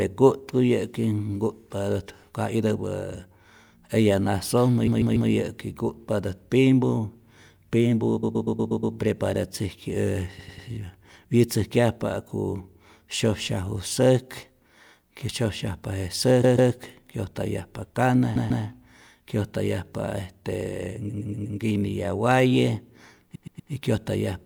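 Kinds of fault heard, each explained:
Repeated frames: at 4.86 s (just after "eya nasojmä"), 8.22, 10.38, 16.43, 18.35, 21.09 and 23.34 s, the decoder plays the same short stretch of speech several times over, giving a stutter. Each repeated block is 96 to 144 ms long and returns two to six extra times, stretching the clip by 0.29 to 0.72 s per event. The block lengths fit runs of four to six compressed frames written or sent more than once.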